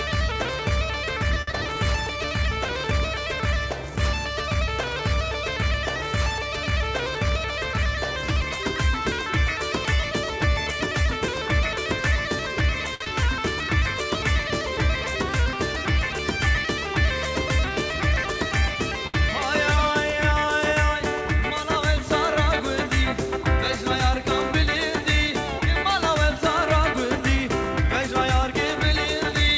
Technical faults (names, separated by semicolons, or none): short stall from a late packet; short concealed packet loss; jitter buffer speed-up